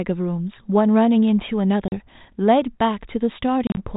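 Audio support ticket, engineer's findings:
Packet loss on an ADPCM call, 1.88–1.95 s and 3.67–3.84 s. Hard-edged silent holes, 40 ms, then 70 ms scattered over 100 ms (longest run 30 ms). Unlike plain dropout: each return slightly distorted, settling in tens of milliseconds as predictor and step size resync.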